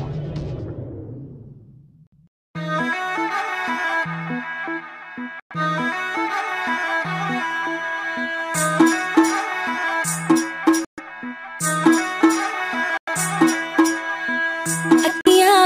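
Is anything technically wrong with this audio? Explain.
Yes. At 2.07, 5.40, 10.85, 12.97 and 15.21 s the sound drops to dead silence for 44 to 130 ms, then resumes. These are likely Bluetooth stalls: radio interference delayed packets, the headphones' buffer emptied, and playback halted until retransmissions arrived.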